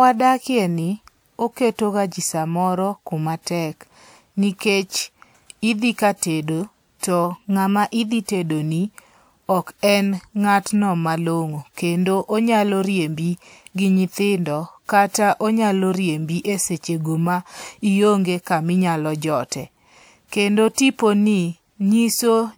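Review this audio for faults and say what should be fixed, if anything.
From 7.24 s to 8.23 s the speech plays 5.22% fast and its pitch rises by 88 cents, close to a semitone, before returning to normal. This is likely a drift correction step, where clock-matching software changed the playback rate in a single jump to rebalance its buffer. To prevent it, cap the correction at small fractions of a percent and slew the resampling ratio gradually instead of stepping it.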